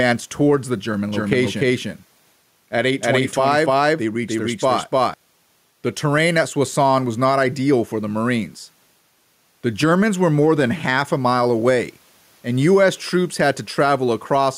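The input gain is set far higher than the microphone needs, so a fast limiter or compressor is likely clamping it down on each loud syllable throughout the clip. The level swings by roughly 5 dB, and the quiet room noise sits about 45 dB below the speech. This gain pumping squashes the dynamics, leaving loud and soft passages pressed close together.

From 1.12 s to 5.14 s, a doubled audio track appears, likely because a second, slower capture path or a misaligned edit mixes in another copy of the same signal. That copy trails by roughly 300 ms at about the same loudness and covers the full frequency range, with no decay or room colour to mark it as an echo. It cuts in abruptly at 1.12 s and drops out just as sharply at 5.14 s, so for those four seconds every phrase is heard twice.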